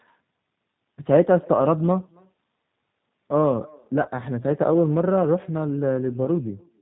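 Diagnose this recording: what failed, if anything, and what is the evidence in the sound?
Every phrase has a faint, thin copy trailing it by roughly 300 ms, at about 28 dB below the direct sound. This is echo with no canceller, a call-processing failure at the far end. That end played the call through a loudspeaker, and its microphone picked the sound up again. With no acoustic echo canceller removing that path, the sound came back after the network round trip, which matches the delay heard here.

Throughout, the sound is band-limited and slightly rough and synthetic, with nothing above 4 kHz. This is the G.729 codec (the G.729A variant) at 8 kbit/s, and its damage is plainly audible. The codec stage does not pass the waveform through. It rebuilds each 10 ms frame from a vocal tract filter, a pitch predictor and a few pulses, so the fine detail is lost.

At 4.03 to 4.08 s and again at 6.25 to 6.28 s, the sound is briefly stretched into a buzzy tone or coloured noise, then weakens before recovering. 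This is VoIP packet loss concealed by the speech codec, a network fault. The first gap fits about 20 ms of missing audio and the second about 10 ms. The decoder filled each gap by extrapolating its last pitch and filter at falling gain. Because every frame builds on the previous one, the distortion lasts beyond the lost audio itself.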